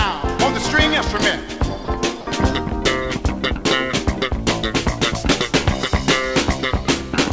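At 1.85 s the sound briefly gives way to steady noise or near silence for about 30 ms, then again at 2.21 s for about 60 ms, and picks up normally after each gap. That's likely sound dropped by the voice detector: the sender judged those stretches to be background, stopped transmitting, and the receiver filled the hole with comfort noise. The whole clip tops out around 8 kHz, which fits a wideband call codec like G.722.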